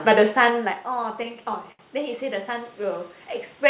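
From 0.74 to 1.81 s, repeated stalls (stutter): late packets kept draining the jitter buffer, and brief fills of up to 70 ms make the speech drag and stutter.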